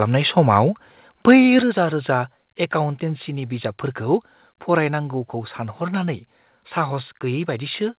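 Microphone overload at 1.28 to 1.33 s: the loudest peaks push about 3 dB past the converter's limit, most likely from input volume set too high, so a small share of the waveform has its tops sheared flat, giving those syllables a harsh, crackling edge over the call's band-limited audio, with nothing above 4 kHz.

Microphone volume stepped down at 1.62 s: right after that distorted peak, the input gain falls by about 6 dB in one step, and sound and background drop together. The likely cause is the call software's automatic gain reacting to the overload.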